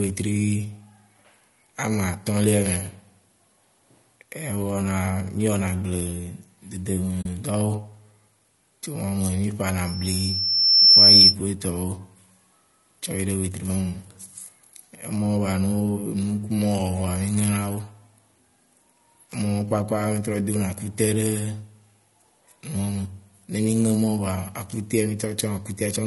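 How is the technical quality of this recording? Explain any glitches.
The technical quality is poor. The speech carries codec damage throughout, a brief dropout and a loud feedback squeal.

Throughout, the speech sounds rough and grainy, with noise between harmonics. The likely cause is low-delay AAC compression (AAC-ELD) at a low bitrate, around 32 kbps.

At 7.21 to 7.26 s there is AAC frame loss with muting. A 40 ms soft-edged hole appears, fitting two lost frames zeroed by the decoder.

From 9.86 to 11.36 s, just before "ku etɔwo", a loudspeaker feedback squeal occurs. The microphone re-amplifies the speaker, and a 5.4 kHz tone builds over about a second to roughly 15 dB above the speech.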